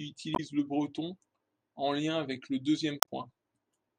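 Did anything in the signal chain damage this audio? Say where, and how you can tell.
Yes. The codec stage shows damaged data in a compressed stream. Short glitches interrupt the speech from 0.33 to 0.40 s and from 3.00 to 3.08 s. Corrupted bytes made the decoder misread frames and lose sync, and the second burst adds about 2 ms of time.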